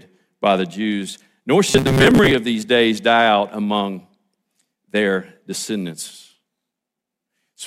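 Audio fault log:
1.68–2.34 s, robotic sound from repeated short buffers: a rigid 134 Hz metallic buzz, likely a roughly 7.5 ms chunk looped over about half the audio. Spectrogram shows flat, evenly spaced harmonics; waveform shows identical repeating cycles.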